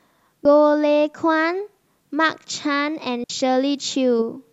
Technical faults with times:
0.45 compressed frames skipped
3.24-3.30 digital wireless dropout

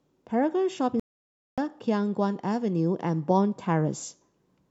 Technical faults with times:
1.00-1.58 Bluetooth dropout

